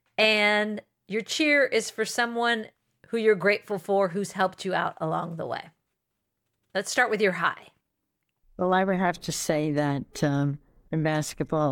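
At 8.73 s, just before "I would have to", a single sharp click cuts through the speech, likely from dropped samples: roughly one sample goes missing, so the waveform jumps abruptly. Unlike a dropout, no sound is lost or silenced; there is only the instantaneous tick.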